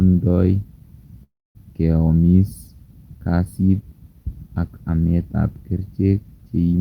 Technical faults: call audio freeze

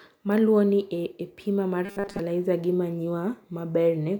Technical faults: robotic sound from repeated short buffers

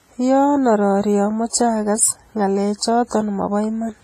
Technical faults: WMA compression

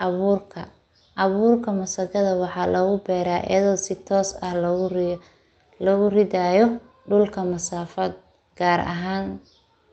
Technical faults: none

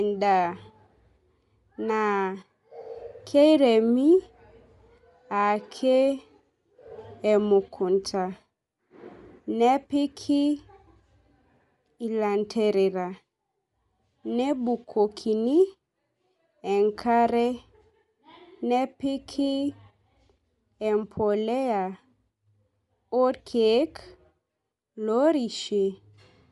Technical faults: Bluetooth LC3 compression

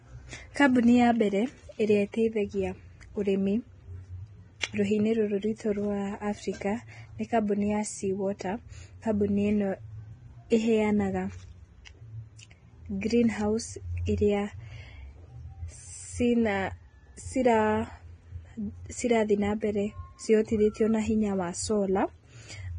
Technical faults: Vorbis compression; pre-echo

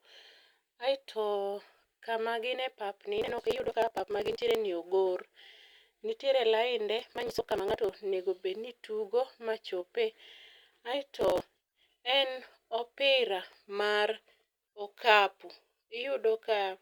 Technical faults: processor overload crackle

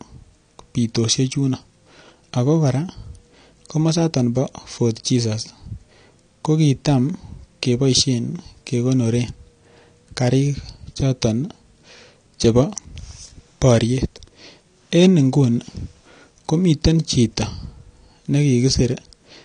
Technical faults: AAC compression

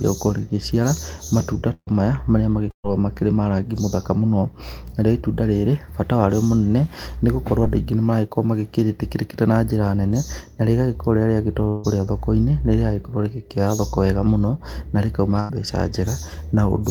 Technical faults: burst of packet loss; short concealed packet loss; long network dropout

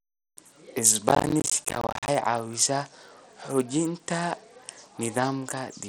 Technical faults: Bluetooth SBC compression; processor overload crackle

